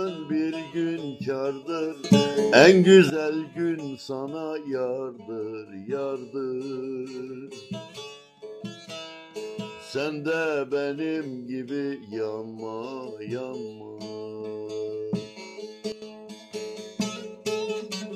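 At 2.04 s the sound and its background noise jump about 15 dB together until 3.1 s, then drop about 12 dB at 15.92 s, both likely sudden gain jumps from unramped digital gain changes.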